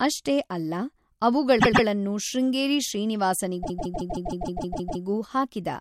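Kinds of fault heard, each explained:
Repeated frames: a short block of encoded audio is decoded again, so the speech stutters in place. At 1.58 s a 130.6 ms block replays twice; from 3.62 s a 156.7 ms block replays nine times, adding 1.41 s. Unlike a dropout, nothing is lost; time is added.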